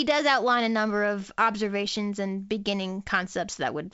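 No faults are present: the speech comes through G.722 wideband telephone coding at 56 kbit/s, with nothing above 7.7 kHz and only the light coding texture that this rate leaves in the signal.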